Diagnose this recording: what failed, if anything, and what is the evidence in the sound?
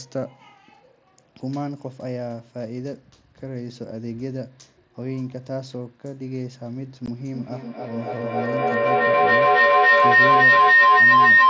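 Unconcealed Bluetooth headset packet loss at 7.06 s: a 15 ms hole with abrupt edges, which fits two lost mSBC frames on the headset link being replaced by silence.

Feedback howl from 7.34 s to the end: the room loop between two devices on the same call builds a tone near 2 kHz, with a loop delay of about a third of a second, peaking about 15 dB above speech.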